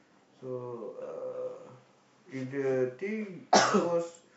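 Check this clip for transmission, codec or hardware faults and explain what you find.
Nothing in the speech signal points to a transmission, codec or hardware fault.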